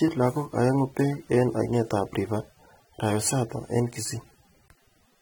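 From start to finish the speech carries plainly audible AAC compression damage, likely from AAC-LC at a low rate, with smearing that fits about 32 kbps. Coarse quantisation of each frame's spectrum leaves sibilants fizzy and sustained sounds warbling, with nothing above 19.3 kHz.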